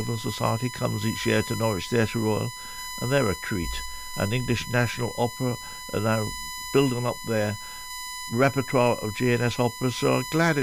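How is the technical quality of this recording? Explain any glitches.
The technical quality is compromised by one fault. USB whine runs throughout: a steady 1 kHz tone, roughly 10 dB below the signal, from 1 ms bus frames leaking through power or ground, drawn as an unbroken horizontal spectrogram line.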